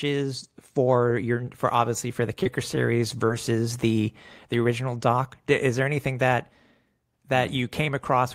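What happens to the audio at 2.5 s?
Right after "for obviously for the", from 2.43 to 2.47 s, there is short concealed packet loss. About 20 ms of audio arrived too late, and the decoder extended the preceding sound to fill it before blending back. Unlike a dropout, there's no silent hole, just a brief smeared wobble.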